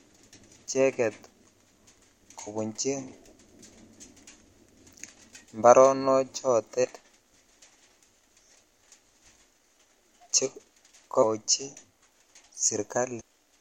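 A speech recording interrupted by four short chirps or squawks, each lasting only a couple of hundredths of a second: at 2.46 s, from 6.83 to 6.85 s, from 11.22 to 11.24 s, and from 13.19 to 13.21 s. These blips come from damaged data in a compressed stream. Corrupted or missing bytes leave the decoder unable to read the frames at those points, so it loses sync and emits garbage until it locks onto a valid frame header again.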